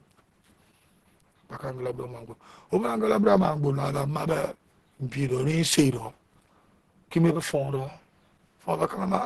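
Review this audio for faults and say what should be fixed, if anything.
Across the whole recording the speech sounds muffled and hoarse, with grainy, rough edges, and nothing at all above 12 kHz. That is likely Opus compression at a low bitrate: the codec's hybrid speech mode, pointing to roughly 16 kbps in super-wideband, keeps band energy but fills detail with folded or noise-like content and caps the top end. To prevent it, encode at a higher Opus bitrate or keep the uncompressed source.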